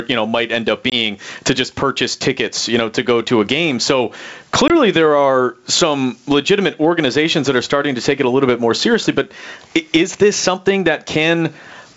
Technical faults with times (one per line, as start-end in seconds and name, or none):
0.00-11.96 gain pumping
0.90-0.96 packet loss on an ADPCM call
4.68-4.76 packet loss on an ADPCM call